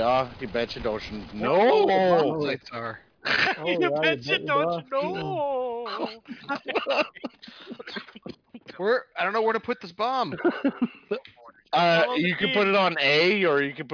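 No faults to report: nothing in the audio points to a problem in capture, processing or playback.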